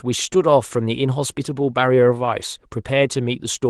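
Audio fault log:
throughout: clock drift between sender and receiver. The sending side's clock runs about 2 percent slow against the receiver's, so the jitter buffer keeps draining. The speech carries a faint, uneven unsteadiness in its timing instead of a smooth, constant pace.
0.51 to 3.69 s: repeated timing corrections. To cover the slow sender, the receiver keeps repeating short slices of audio, stretching playback to about 98 percent speed and adding roughly 70 ms overall. Each repeat is tiny, so it comes across at most as slight hiccups and a wavering tempo.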